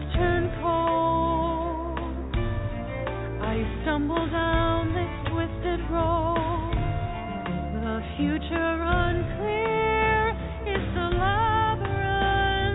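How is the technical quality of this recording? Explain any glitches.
No faults can be heard in the recording, which has the narrow, telephone-like bandwidth of a call path with nothing above 4 kHz, consistent with G.711 mu-law coding at 64 kbps.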